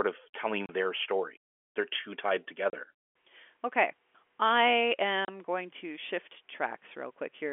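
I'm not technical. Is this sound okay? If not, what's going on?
No. There is packet loss filled with silence at 0.66, 2.70 and 5.25 seconds: three short holes of 30 milliseconds each, just before "their story", just after "too tied", and just before "going to shift". Speech sent over a network travels in small chunks. When a chunk goes missing, the receiver plays nothing in its place, so the speech drops out abruptly. Each gap fits a single lost chunk.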